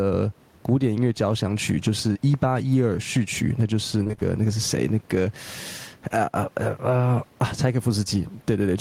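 Right from the start you can hear gain pumping running through the whole speech clip. The background otherwise sits about 42 dB under the talker, and the level gets pulled down on each loud sound, swinging by something like ten decibels. That's most likely the input gain set way too hot, with a fast limiter or compressor clamping down on each loud syllable. The result is squashed speech where loud and soft bits end up closer in level.

At about 2.13 to 2.17 s, just after "响曲就是" and before "一八一二", there's a short concealed packet loss. Roughly 20 ms of audio didn't make it to the decoder in time, and the receiver papered over the hole by stretching the last bit of sound for about 17 ms before blending back into the real signal. It comes across as a brief smear or wobble.

The rougher spot is from about 4.03 to 4.23 s, between "曲那就是" and "那个是谁", where there's repeated packet loss that gives a robotic sound. 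Within that fifth of a second there seem to be five separate holes, the longest around 25 ms, and about half the stretch ends up as patched-in guesswork. Each patch barely finishes before the next gap arrives, so the sound turns choppy, with pieces missing.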